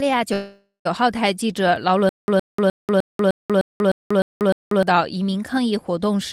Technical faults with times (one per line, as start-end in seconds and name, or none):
0.33-0.87 call audio freeze
2.09-4.83 stutter with silent gaps